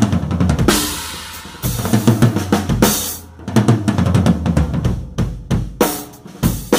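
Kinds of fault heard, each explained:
No technical fault can be heard anywhere in this audio. There is nothing here that calls for a line of its own.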